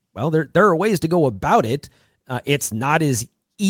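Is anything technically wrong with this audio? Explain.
No, nothing is technically wrong with this audio.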